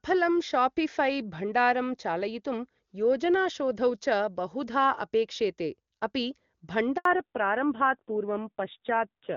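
Speech that sounds clear and full up to 6.97 s, with the wideband HD Voice codec carrying it cleanly and at most faint coding damage, which fits AMR-WB at or near its top rate of 23.85 kbit/s. From 6.97 to 7.05 s the sound dies away abruptly and there is an 80 ms hole of silence. This is a handover gap: while the call was passed from one network to another, no speech frames arrived, so that stretch of speech is simply lost rather than smeared or concealed. When the sound returns at 7.05 s it is noticeably duller and rougher, and it stays that way to the end. This is a fallback to narrowband. After the handover the call dropped from AMR wideband to the older narrowband AMR codec, which carries nothing above 4 kHz. The missing top octave strips out the crispness of consonants, and the harsher texture points to a low narrowband rate such as 7.4 kbit/s.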